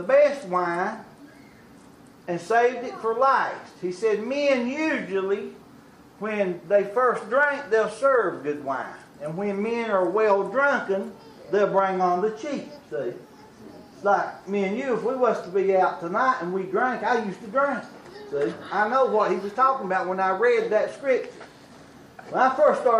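From start to finish the audio has a watery, swirling quality, with smeared attacks, a dulled top end and metallic chirps on bright, hissy content. This is plainly audible MP3 compression damage, most likely from encoding at around 64 kbps, where the encoder trims treble and drops weak spectral detail.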